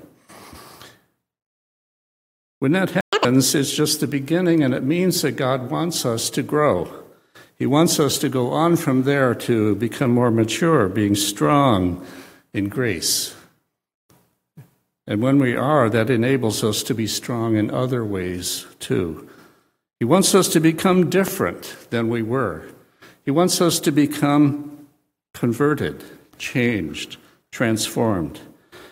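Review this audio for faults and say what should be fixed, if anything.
At 3.01 s the output drops out completely for 120 ms, until 3.13 s: a playback stall, likely from the player's buffer running dry or its thread being blocked. The waveform shows a flat gap, and the spectrogram a blank vertical band. Deeper buffering and a higher-priority audio thread would prevent it.

From 3.13 to 3.25 s the player makes up the lost time by playing at 2.0x speed, a catch-up at higher speed. The resampling lifts pitch by roughly ten semitones, so the spectrogram shows harmonics shifted sharply upward and compressed for that stretch. Absorbing the backlog with a gentler speed change, or time-stretching without a pitch shift, would prevent it.

At 21.28 to 21.31 s a single loud pop sits on top of the sound, which carries on beneath it, peaking about 10 dB above the signal. It is likely a voltage transient from a connector, switch or driver glitch. 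The waveform shows one tall, narrow spike, and the spectrogram a thin broadband vertical line. Secure connections and muting outputs during switching would prevent it.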